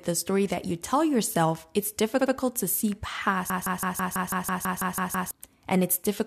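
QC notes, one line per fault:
2.18 to 2.32 s, repeated frames: right after "you tell yourself it's", a 70 ms block plays twice more before "to see", a short stutter that stretches the audio by about 0.14 s. The duplicated compressed data fits a run of a few frames being resent.
3.5 to 5.31 s, broken-record loop: after "to see", a 164 ms fragment repeats exactly, back to back, 11 times. The likely cause is a stalled player or stream resending its last held piece, so the sound that belonged there is lost.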